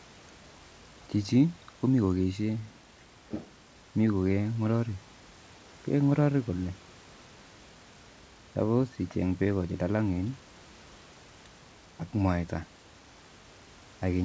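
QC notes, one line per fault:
Nothing to flag on this speech, which comes over a call path whose top end stops at 8 kHz, as a wideband codec does, with faint room noise sitting about 29 dB under the talking.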